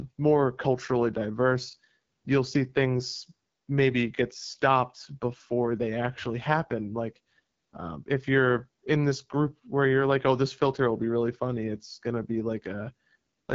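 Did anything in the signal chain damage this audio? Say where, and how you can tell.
Yes. The AMR wideband (HD Voice) codec damage runs through the whole speech clip: nothing sits above 7.5 kHz, and the speech sounds rough and raspy, which fits one of AMR-WB's lowest rates, around 8.85 kbit/s, where the coarse vocal-tract model fails to carry the voice cleanly.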